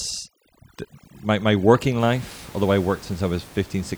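From 0.0 to 2.0 s the speech shows overdone noise removal. A noise reduction stage was pushed too hard. It pulls individual frequency bands down, or shuts them off, whenever they sit close to its noise estimate. Quiet parts of the speech get caught too. The gaps drop and break up into small twinkling specks. The room noise, about 23 dB below the speech, is what the tool was fighting.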